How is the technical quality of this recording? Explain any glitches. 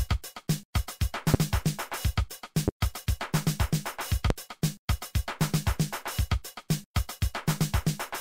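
Three loud pops interrupt the recording. They come at 1.34 to 1.37 s, 2.68 to 2.71 s and 4.30 to 4.33 s. Each is a single sharp pulse, roughly 20, 15 and 20 dB above the audio. A voltage spike, likely from a switch, plug or static, jumps into the signal. The sound continues underneath.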